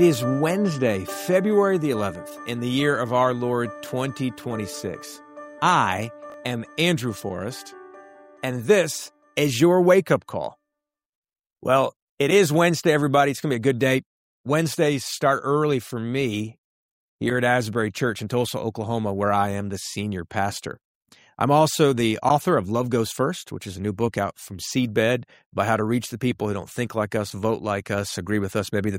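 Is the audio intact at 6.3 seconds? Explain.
No, at 6.30 to 6.34 s there is a brief garbled moment, caused by chunks out of order: a 20 ms chunk arrives one chunk late and plays after its successor, so nothing is lost but the sequence scrambles across three hard joins.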